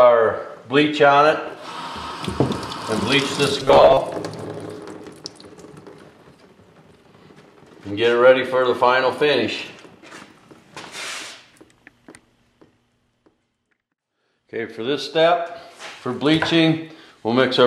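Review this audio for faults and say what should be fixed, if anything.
From 3.60 to 3.97 s the sound turns into a rigid, metallic buzz at 134 Hz. This is robotic sound from repeated short buffers. The likely cause is new audio arriving too seldom. The software fills each gap by replaying the last block, which fits a block of about 7.5 ms, while the real audio is skipped. Roughly half of this stretch is repeated material. The repeat rate sets the buzz frequency. To prevent it, give the playback buffer enough headroom that fresh audio always arrives in time.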